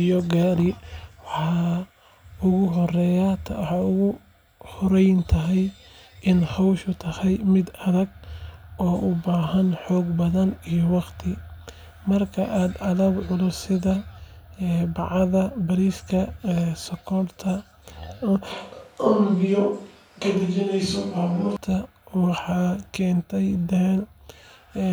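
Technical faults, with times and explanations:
18.52 to 21.57 s, switch to a distant microphone: the speech suddenly goes roomy and hollow, loses its low end, drops by around 5 dB, and picks up a room noise floor that sits roughly 35 dB under the speech. It snaps back just as abruptly at 21.57 s. The likely cause is the close mic dropping out and a far-off one, such as a camera mic, filling in, so you're hearing more room reflection and less direct sound.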